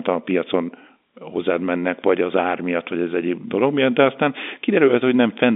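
No technical faults can be heard in this speech, which comes through G.711 telephone coding with its band running from about 250 Hz to 3.6 kHz and nothing above about 3.7 kHz.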